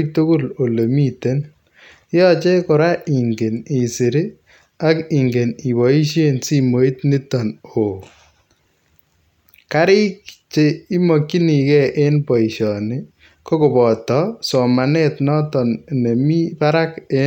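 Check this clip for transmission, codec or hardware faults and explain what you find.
Checking this clip turns up no faults to explain.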